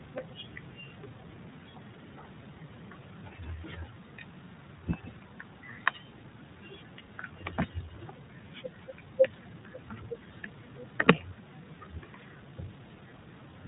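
iLBC codec damage runs through the whole clip. The speech is coded as independent short frames, consistent with the 20 ms, 15.2 kbps mode, and nothing above 3.8 kHz survives, so it sounds muffled and narrowband, with a plainly audible rough, synthetic edge.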